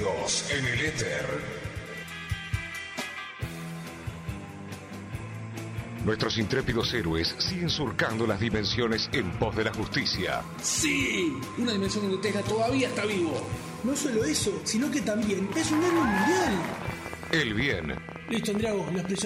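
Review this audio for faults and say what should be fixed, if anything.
A train of clicks runs from 16.42 s to the end at 19.23 s: about forty sharp ticks, roughly 13.2 per second at uneven spacing, peaking around 10 dB above the sound. Likely cause is interference or a faulty connection or power supply injecting pulses. Waveform shows thin repeated spikes; spectrogram shows vertical broadband lines. Shield and reroute cables, and check interface drivers and buffer settings to prevent it.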